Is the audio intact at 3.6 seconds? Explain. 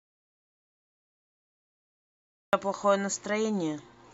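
Yes, at 3.6 seconds the speech plays through intact, with no dropout, click, distortion or other fault audible at that point.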